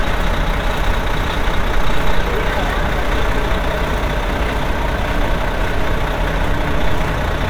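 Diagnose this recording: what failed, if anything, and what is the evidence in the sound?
Nothing here failed; there's nothing in the sound pointing to any stage of the chain going wrong, so there's no fault to diagnose.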